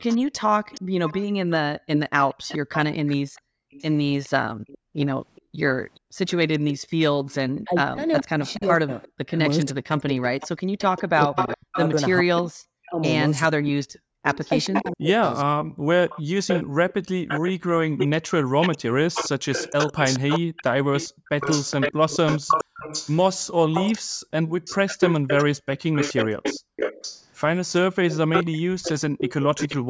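From 0.08 s to 29.77 s a second copy of the speech trails the original by about 420 ms, only slightly quieter. This is likely an echo leak: a far-end echo canceller let its loudspeaker's output slip back. Unlike room reverberation, it is a distinct, late repeat rather than a smear.

Between 3.33 s and 6.9 s the background drops out by about 40 dB for roughly a second in total. This is background gated by the echo canceller, which clamped the microphone while the loudspeaker played. The room tone dips away and returns when the canceller lets go.

From 7.64 s to 15.68 s the talker's own speech sinks deeply or breaks into pieces, around three seconds in all, likely because speech was suppressed in double talk while both sides spoke. Unlike the gating, this removes the talker, not just the background.

The same background gating returns briefly at 21.09 s, 23.99 s, 26.6 s and 29.82 s, each dip lasting under a third of a second. 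The call microphone processing also leaves nothing above 8 kHz.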